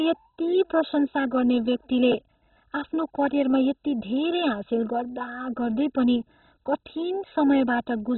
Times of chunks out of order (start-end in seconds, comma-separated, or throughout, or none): 2.12-2.14